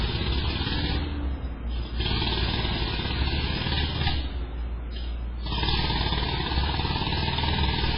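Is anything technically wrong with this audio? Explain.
Yes. Throughout, the sound is dull and watery, with nothing above 5.2 kHz and swirling, smeared attacks, likely heavy MP3 compression at a very low bitrate, near 16 kbps.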